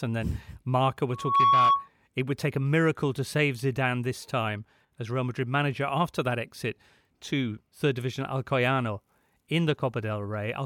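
From 1.12 to 1.89 s, loudspeaker feedback squeal cuts into the speech. A microphone is re-amplifying its own loudspeaker, and the loop runs away at 1.1 kHz. The tone swells over about a third of a second to roughly 10 dB above the speech, then stops just before "it would take a".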